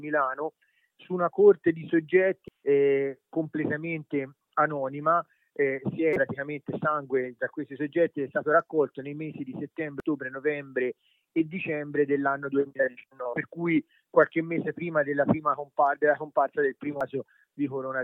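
Brief chirps and blips break through the sound at 2.48 s, 6.13 to 6.16 s, 10.00 s, 13.33 to 13.36 s and 17.01 s. The first, third and last last only about 4 ms, and the second and fourth last a few hundredths of a second. This is damaged data in a compressed stream. Corrupted bytes make the decoder misread those frames and lose sync until it finds the next valid frame header, so garbled output briefly replaces the intended audio.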